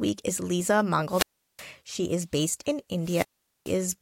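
At 1.08 s the speech breaks up in a wireless microphone squelch dropout: the FM radio link weakens, hiss swells, then the receiver's squelch gates the output to near silence for about 0.37 s before the signal recovers at 1.66 s. The same happens from 3.01 to 3.78 s, with a 0.44 s mute. The rising static before each hole sets this apart from a digital packet dropout, which cuts out abruptly.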